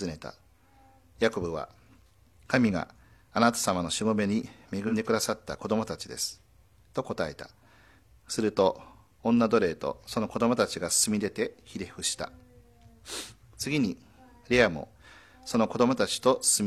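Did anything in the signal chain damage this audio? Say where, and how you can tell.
Yes. AAC frame loss with concealment at 4.87 to 4.94 s, in the codec stage. A 43 ms patch turns smeared and noisy, which fits a single lost frame that the decoder rebuilt from the previous good spectrum rather than silence.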